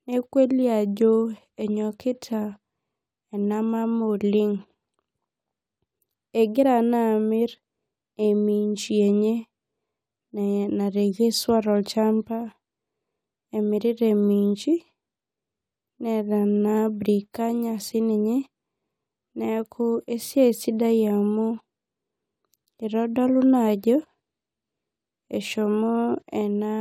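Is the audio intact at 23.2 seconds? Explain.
Yes, at 23.2 seconds the audio is intact, with no fault audible at that moment.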